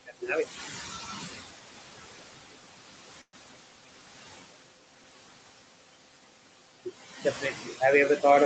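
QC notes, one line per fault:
throughout: noise suppressor artifacts. The room noise, which sits about 10 dB below the speech, is pulled down by about 21 dB between phrases and comes back up under them. The suppressor judges each band, frame by frame, as noise or speech. The call bandwidth carries nothing above 8 kHz.
0.06–0.30 s and 7.41–7.81 s: speech cut by the noise suppressor. In both spans the suppressor mistakes quiet speech for background and turns it down with the noise. The first drop goes as deep as about 15 dB and touches around a tenth of a second of sound. The second reaches about 11 dB over around a fifth of a second. The softer sounds there come across swallowed and faint.
3.21–3.35 s: call audio freeze. The sound stops moving forward. The last bit is stretched into a fading buzz or hiss, then about 50 ms of silence follows. About 117 ms is filled in this way. Playback then picks up exactly where it stopped, so nothing is lost. 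Everything after this point arrives about 117 ms later. Packets were likely held up in transit, leaving the jitter buffer empty until they came.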